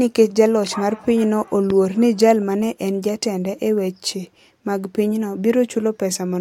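Speech with a single loud pop from 1.70 to 1.72 s, peaking a few decibels above the speech, which carries on underneath. It is likely a voltage pulse from a plug, switch or static discharge. The waveform shows an isolated sharp spike, and the spectrogram a thin vertical broadband stripe.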